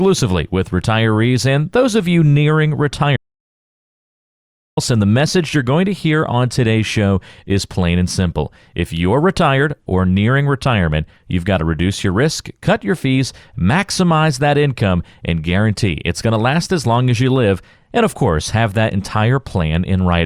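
At 3.17 s, straight after "those of you nearing", the speech breaks off into an audio dropout to silence lasting about 1.6 s, resuming at 4.77 s with "and the message you're". The gap is silent with no room tone, so it is not a natural pause or a noise gate. Speech cuts off and returns mid-flow rather than fading or being concealed. The likely cause is lost input while recording continued.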